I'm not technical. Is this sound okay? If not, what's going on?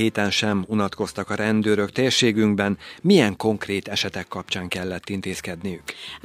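Yes, nothing in this speech recording points to a technical problem, so there's nothing to fix.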